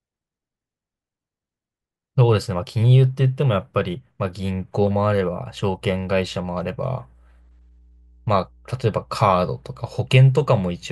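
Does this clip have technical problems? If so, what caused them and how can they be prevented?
Yes. From about 5.0 s to the end, a steady 60 Hz mains hum sits under the speech, roughly 30 dB below it. Power-line current is leaking into the signal through a ground loop or a nearby transformer. Keep cables away from power supplies and break ground loops with proper grounding or an isolator.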